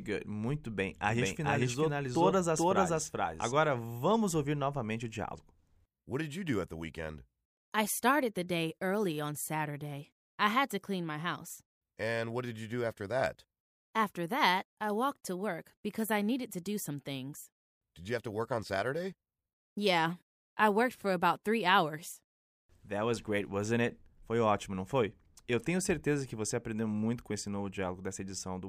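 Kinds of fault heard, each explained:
Doubled audio track: From 1.08 to 3.52 s the speech is mixed in twice. A second, full-band copy at about the same level trails the original by roughly 400 ms, so everything sounds like a dry, flat echo with no room tail. It cuts in and out abruptly at those edges. The likely cause is a slower capture path or an edit leaving two copies out of step.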